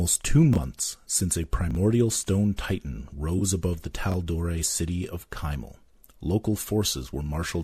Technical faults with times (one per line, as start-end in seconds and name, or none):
0.53-0.58 chunks out of order
1.71-1.75 chunks out of order
3.38-3.42 AAC frame loss with concealment
4.10-4.14 chunks out of order